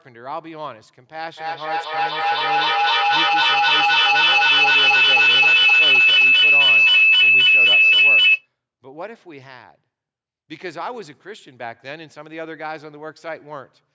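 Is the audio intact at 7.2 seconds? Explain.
No. A feedback howl runs from 1.37 to 8.48 s, so 7.2 s falls inside it. Two devices on the call share a room, and each trip round the loop adds level. The tone around 3 kHz builds as the loop repeats roughly every third of a second and peaks about 17 dB above the speech.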